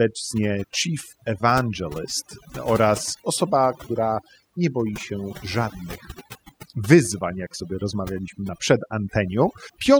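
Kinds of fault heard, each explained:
Overdone noise removal: noise reduction set too hard cuts single frequency bands near its noise estimate, taking quiet speech too. Throughout, the background drops and breaks up into twinkling specks; unlike a gate, it acts per band.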